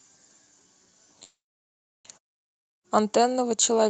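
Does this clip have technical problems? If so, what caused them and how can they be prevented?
Yes. A call audio freeze runs from 1.23 to 2.07 s: the last sound trails off into roughly 0.7 s of silence, then speech resumes exactly where it stopped. That's likely a stalled jitter buffer. Unlike a dropout, nothing is lost, only delayed. Steadier network routing and a deeper jitter buffer would prevent it.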